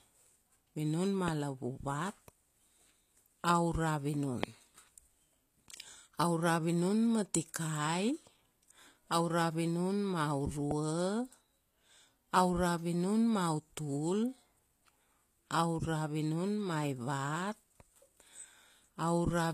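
A speech recording carries plainly audible HE-AAC compression throughout. The sibilants come out gritty and metallic rather than dull, and the spectrum stops at 14.9 kHz. That points to spectral band replication, likely at a low bitrate around 24 kbps, where the treble is rebuilt from copied lower bands instead of coded. This separates it from a simple low-pass or band-limited recording, which would lose brightness without the harsh, misaligned top end. Three loud pops sit on top of the speech, at 1.28, 4.43 and 10.71 s, each lasting about 20 ms. The first and third peak about 15 dB above the signal and the second about 20 dB. The speech carries on unbroken beneath each one. That marks them as added voltage pulses, likely from a plug, switch or static discharge, rather than dropouts or edit clicks, which would interrupt or cut the sound itself.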